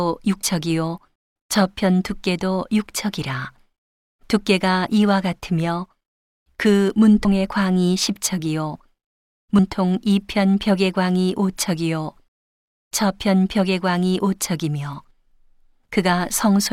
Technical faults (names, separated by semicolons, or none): compressed frames skipped